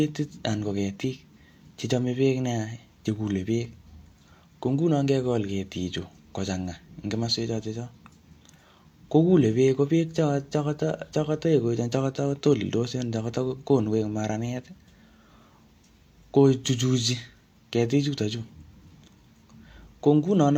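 No technical faults can be heard anywhere in this speech recording. Nothing in the audio calls for a timestamp or a note of any kind.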